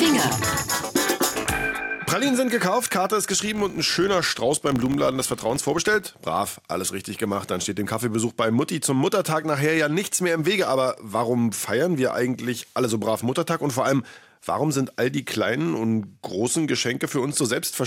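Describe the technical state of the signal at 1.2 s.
The signal at 1.2 s is intact, with no audible fault at that moment.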